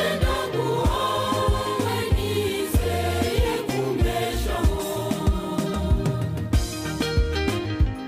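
Nothing goes wrong here: the audio runs along without a single hitch, dropout or glitch from the first moment to the last.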